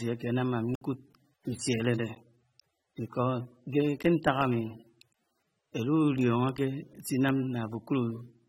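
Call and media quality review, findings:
AAC compression, throughout. Dull, smeared speech with warbly, fizzy sibilants; nothing above 16.6 kHz. Likely an AAC-LC encode at a low bitrate, around 28 kbps. Quantiser starves the upper bands, leaving spectral holes and noisy fill. Damage plainly audible.

Block of digital silence, 0.75–0.81 s. Short hole of about 62 ms, hard cut to silence and back. Probable component: output buffer not filled in time. Block of digital silence, 2.15 s. About 12 ms dropout, heard as a tick or dip. Same hard-edged silent block.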